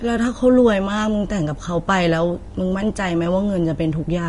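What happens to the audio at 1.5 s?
At 1.5 s the speech carries the same damage heard across the whole clip, most likely Vorbis compression. Nothing sounds above about 10.6 kHz, so the top end is cut away. Below that limit the treble is quantised so coarsely that fine detail turns into noise of similar energy. The speech sounds hissy and grainy. Tones are roughened and onsets blurred. The damage is plainly audible and fits a low bitrate near 33 kbps.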